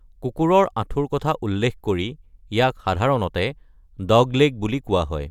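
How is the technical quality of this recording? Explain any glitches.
Listening to the recording, nothing stood out as a glitch or technical problem.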